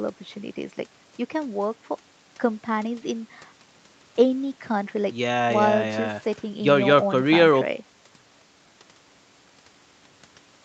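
Nothing here counts as a fault: the speech has simply gone through ordinary call microphone processing and a WebRTC call path, which is why nothing reaches above about 8 kHz.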